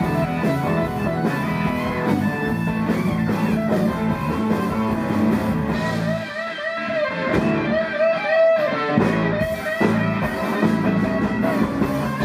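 Nothing goes wrong anywhere in the audio, so there's no technical fault to point to at any moment.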